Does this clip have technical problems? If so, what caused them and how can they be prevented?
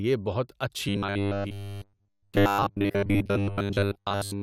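Yes. Robotic sound from repeated short buffers runs from 0.89 s to the end of the clip. The speech turns into a rigid metallic buzz at 100 Hz, which fits a 10 ms buffer being replayed most of the time, likely because fresh audio arrived too seldom. A larger buffer or steadier audio delivery would keep new samples arriving in time and prevent the repeats.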